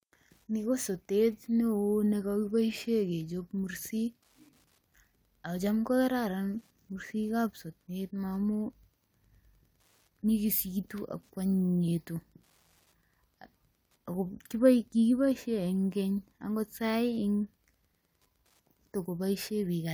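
Wi-Fi interference runs through the whole speech clip. A nearby radio's beacon, every 102.4 ms, is rectified by the circuit. It makes faint, steady ticking, well below the voice.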